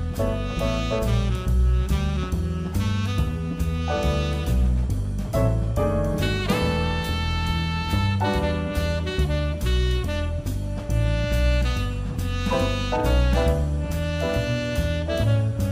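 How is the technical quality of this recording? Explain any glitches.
No glitches can be heard anywhere in the recording, and the signal stays continuous and stable throughout.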